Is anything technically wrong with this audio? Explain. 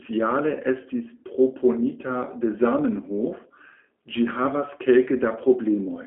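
Yes. The whole clip has G.729 codec damage. The speech is rebuilt from a vocal tract filter, a pitch predictor and a few pulses per frame, which fits an 8 kbit/s stream. It sounds plainly rough and slightly synthetic, confined to a 250 Hz to 3.4 kHz phone band, with nothing above 3.8 kHz.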